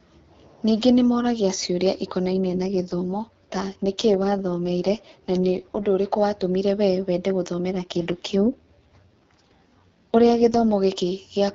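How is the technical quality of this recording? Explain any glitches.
The recording has two stretches of AMR rate drop on an AMR wideband (HD Voice) call, where the speech turns rough and synthetic for a few seconds.

AMR rate drop, 2.32–5.87 s and 7.70–10.65 s: the codec steps down, which fits a change from 12.65 to 6.6 kbit/s, so the speech turns raspy and buzzy. On a spectrogram the band and continuity stay intact, with coarser, smeared harmonics.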